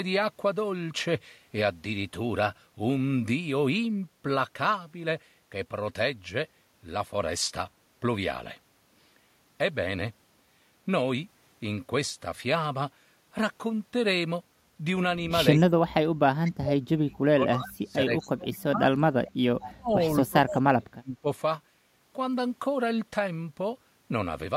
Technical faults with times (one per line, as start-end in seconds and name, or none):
15.84-15.98 speech suppressed in double talk
16.44-16.52 echo leak
16.59-19.32 speech suppressed in double talk
18.19-18.31 echo leak
19.61-19.71 echo leak
19.66-19.93 speech suppressed in double talk
20.24-21.27 speech suppressed in double talk